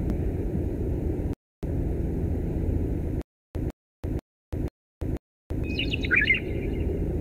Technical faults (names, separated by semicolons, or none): rebuffering stall; stutter with silent gaps